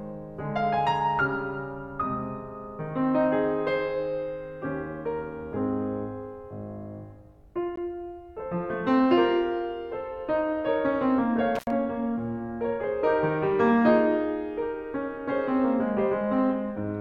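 At 7.76 s the music drops out for a moment. This is a gap between stream segments. Two consecutive pieces of the stream, which appear to be about 4 s long, do not line up in time. Their time stamps leave a hole of about 16 ms, and the player fills it with silence. The edges are hard, so it reads as a brief, clean blink in the sound. Nothing is missing from the music. It is just pushed later.

From 11.55 to 11.70 s there is an intermittent contact. A loose cable or plug lets the connection open for about 83 ms. The music cuts out with crackle as the contact breaks and again as it closes. While the line is open, a faint hiss remains. The scratchy edges set it apart from the clean gap earlier.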